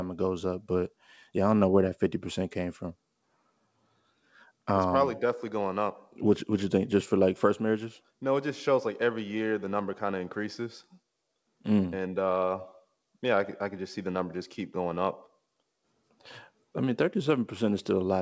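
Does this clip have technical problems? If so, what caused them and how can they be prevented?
No, the speech shows no technical faults: it has passed through call microphone processing and G.722 wideband telephone coding at 64 kbit/s, so nothing is present above 8 kHz and any coding damage is faint at most.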